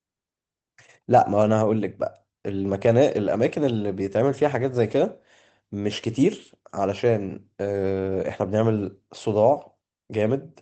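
No technical faults can be heard in the speech. It carries the coding texture of a working WebRTC call path, with the top end stopping at about 8 kHz, which fits an Opus codec running at around 20 kbps.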